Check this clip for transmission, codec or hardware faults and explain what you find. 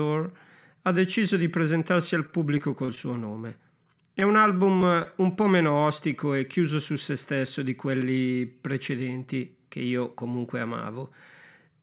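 Two bursts of repeated packet loss (robotic sound) are present in this speech clip, which comes through a narrowband call path with nothing above 4 kHz, consistent with G.711 mu-law at 64 kbps.

Repeated packet loss (robotic sound), 2.26 to 2.98 s after "deciso di presentarsi al", and 4.20 to 5.07 s before "un po' meno ostico": in each span, short gaps of up to about 27 ms are patched by extending the previous sound. The result is choppy speech with pieces missing. Unlike a single dropout, the holes recur in close succession.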